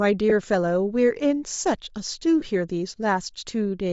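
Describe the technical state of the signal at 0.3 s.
From 0.30 to 0.32 s, lost LE Audio frames: about 15 ms went missing, which fits two 7.5 ms frames, so the decoder repeated the last spectrum with scrambled phase, leaving a brief noisy smear. Underneath, the speech carries a breathy, grainy edge with a noise-filled top end, likely from Bluetooth LC3 compression at a low bitrate around 32 kbps.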